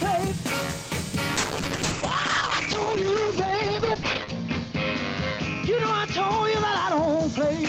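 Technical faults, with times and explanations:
1.38–7.68 s, call bitrate drop: the sound turns rough, watery and muffled, and stays that way to the end of the clip, with the worst stretch lasting about 2.94 s. The call's bandwidth estimate fell and the encoder was pushed from 32 kbps down to 8 kbps. At that rate it codes far more coarsely, which causes the gritty, smeared texture. It also cuts the audio band from 20 kHz to 8 kHz, which takes away the brightness.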